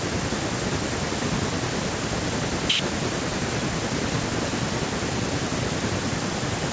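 No technical faults can be heard in the speech, which has come through ordinary call microphone processing.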